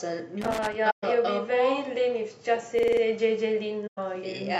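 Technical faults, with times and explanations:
0.41–0.75 s, loose connector crackle: a worn or dirty contact makes and breaks rapidly, chopping the speech into an irregular burst of scratchy crackle. Its ragged, random texture distinguishes it from the clean, periodic repetition of a buffer loop.
0.90–1.04 s and 3.86–3.98 s, AAC frame loss with muting: the decoder zeroed lost frames, leaving soft-edged gaps of about 128 ms and 107 ms, consistent with six and five frames respectively. Overlapping windows fade the sound out and back in, unlike a hard dropout.
2.79–3.02 s, system hang loop: the system stalled while the audio hardware kept cycling the same 46.44 ms stretch, which fits a 2048-sample buffer. That stretch repeats exactly five times at 21.5 Hz, producing a mechanical stutter. Its exact repetition distinguishes it from crackle, and the stutter is not a silent gap.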